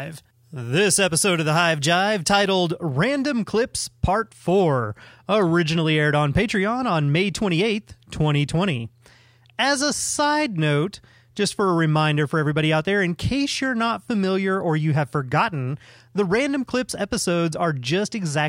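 Pre-emphasis left on, from 0.0 to 2.7 s: the treble lift of a 50/15 µs curve was never undone by its matching de-emphasis, so high frequencies stand about 8 dB above 1 kHz at 10 kHz, leaving the speech thin, bright and sibilant.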